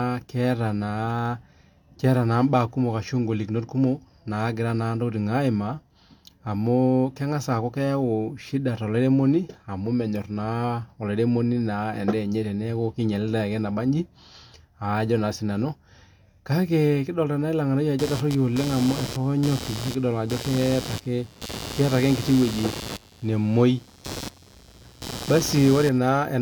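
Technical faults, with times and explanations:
Throughout: low-bitrate audio saved at a high bitrate. The MP3 reaches about 20.1 kHz, yet the speech keeps the smeared, swirly artefacts of an earlier coarse encoding, most likely a low-bitrate codec such as 48 kbit/s HE-AAC. Re-encoding at high bitrate enlarged the file without restoring what was lost.
17.99 to 25.99 s: computer activity noise. A buzzy, scratchy pulsing near 100 pulses per second sits roughly 10 dB below the speech and tracks the machine's workload rather than the voice, as processor or graphics load swings disturb the audio circuit's shared ground.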